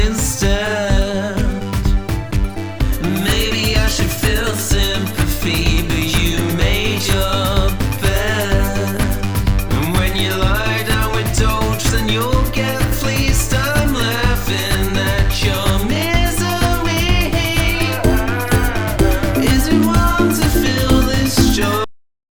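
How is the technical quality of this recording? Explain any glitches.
The recording has one clear glitch, a cut-off end. At 21.84 s the sound stops abruptly in the middle of an event and falls straight to digital silence for the final half second or so. The closing buffers were never written, so there is no decay and no fade. A deliberate fade or a natural ending would taper off. A mid-file dropout would be followed by sound resuming, but here nothing returns before the file ends.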